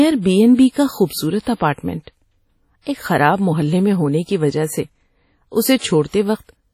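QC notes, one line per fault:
Throughout: WMA compression, likely the cause of the ringing, washy quality of the speech, with a hiss that swells and fades with the level. The damage is heavy and fits a low bitrate around 32 kbps. The coarse transform quantisation zeroes weak spectral lines and smears noise across long blocks. A spectrogram shows nothing above 17.5 kHz, and the upper bands break into patchy, blocky islands that flicker between frames instead of showing continuous harmonic texture.
0.55–0.59 s, 1.05–1.10 s, 1.41–1.47 s, 1.54–1.60 s, 2.82–2.86 s, 5.78–5.81 s: pre-echo. A short hiss runs ahead of each sharp onset, lasting 37 to 58 ms, and each attack sounds softened rather than crisp. The onset lands late in a long transform block, so noise sized for the loud part fills the quiet moment before it. On a spectrogram this appears as a broadband smudge just before each attack. The waveform shows low fuzz in what should be near-silence.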